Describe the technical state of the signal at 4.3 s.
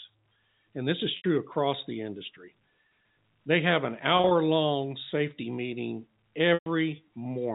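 At 4.3 s the signal sits inside a stretch of packet loss with pitch repetition, running from 4.17 to 4.31 s. About 80 ms of audio is missing, scattered across those 140 ms. The longest single gap is 30 ms. At each gap the receiver repeats the last pitch period to fill the hole. Because every loss is short, it sounds like a brief held, buzzy note rather than silence. The G.711 telephone band, with nothing above 4 kHz, carries on through it.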